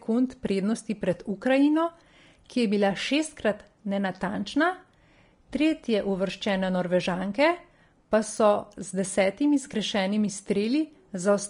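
Vorbis compression runs through the whole speech clip. Nothing is heard above 10.6 kHz, where the encoder has cut the band. Below that, the treble was quantised too coarsely to keep its fine detail. That detail comes back as noise of similar energy. The top end sounds hissy and grainy. Consonant onsets blur. The damage is plainly audible, which fits a low bitrate around 35 kbps.

Clock slip clicks begin at 0.10 s and last until 11.49 s. The likely cause is two devices running on free clocks, off by something like 500 parts per million. Each time the drift reaches a full sample, one sample is dropped or repeated. That happens roughly every 0.04 s, about 25 times a second, and around 300 times in total. The ticks are faint and regular. At this rate they merge into a soft rattle under the speech.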